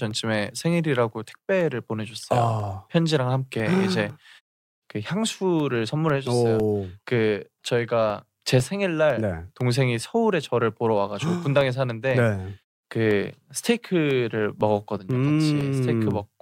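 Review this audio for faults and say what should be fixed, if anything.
Periodic USB or driver dropouts run from 0.11 s to 16.11 s: every 0.5 s, roughly a millisecond of speech is replaced by silence, giving about thirty evenly spaced ticks. Prevent this by stopping the background task that stalls the USB bus or driver.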